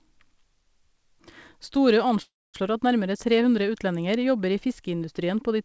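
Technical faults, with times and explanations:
2.22–2.56 s, call audio freeze: a fading tail then silence fills 0.32 s, likely from late packets draining the jitter buffer. The speech resumes where it stopped, with nothing lost.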